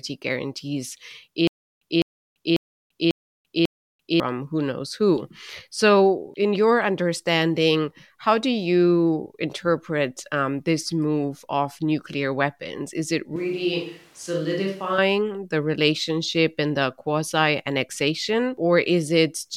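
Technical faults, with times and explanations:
1.47–4.20 s, stutter with silent gaps: a likely playback stall replays a 205 ms fragment five times, every 545 ms, with 340 ms of digital silence between, before "who knows who".
13.36–14.98 s, switch to a distant microphone: likely loss of the close microphone, so speech turns suddenly roomy and thin, about 5 dB quieter with louder background noise, until "the relationship and the".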